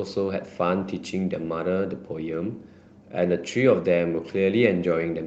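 Nothing stood out as a technical fault on listening to this speech recording.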